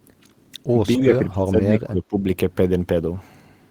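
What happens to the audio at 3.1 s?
Nothing goes wrong at 3.1 s; the speech carries on intact through that moment.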